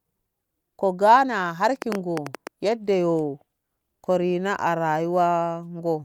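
From 1.82 to 2.48 s there's a train of clicks, around nine a second, unevenly spaced and well above the speech, likely interference or a faulty connection.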